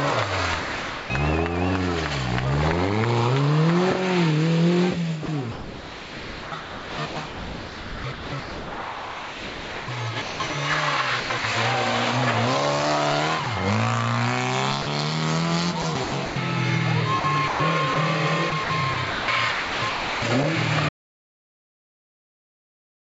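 At 0.60 to 1.10 s, the sound drops out for half a second and steady noise or near silence takes its place. This is sound dropped by the voice detector. The sender likely judged that stretch to be background and stopped sending. The receiver filled the gap with comfort noise. The same brief swap recurs at 13.44 to 13.46 s and 14.82 to 14.86 s. These last only 20 and 40 ms.

From 5.26 to 10.50 s the sound is chopped by the voice detector. The detector likely keeps switching on and off. About 4.2 s of that stretch becomes comfort noise. The sound turns choppy. Shorter chopped stretches follow at 11.20 to 11.44 s, 15.82 to 16.36 s, 17.20 to 17.96 s and 18.50 to 20.22 s. In the last of these, about 0.9 s is replaced.

At 20.89 s the audio drops out to silence and stays silent to the end. This is silence, with no hiss or room tone. The input was probably lost, through a dropped connection or a mute, while recording continued writing silence. 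Everything after that point is gone.

The clip passed through a G.722 call path, so nothing is heard above 8 kHz.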